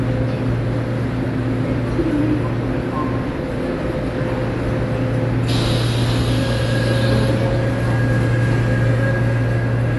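A sound recording, dull and smeared from start to finish. Nothing sounds above 11.5 kHz, and sustained sounds warble with a fizzy texture. The likely cause is AAC compression, plainly audible, consistent with AAC-LC at a low bitrate around 32 kbps.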